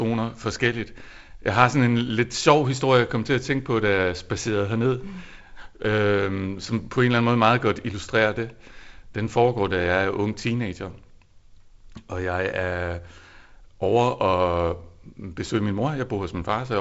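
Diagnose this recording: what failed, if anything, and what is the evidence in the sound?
Nothing in the speech points to a failure at any stage, and the signal carries the character of G.722 wideband telephone coding, with content stopping near 7.7 kHz and a faint hiss and slight graininess that fit the codec's reduced 48 kbit/s mode.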